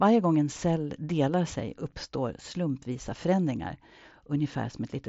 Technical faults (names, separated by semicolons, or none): none